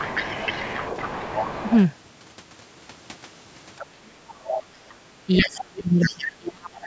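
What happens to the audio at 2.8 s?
Nothing goes wrong at 2.8 s; the speech passes through intact at that moment, with only the ordinary bass trimming of call microphone processing.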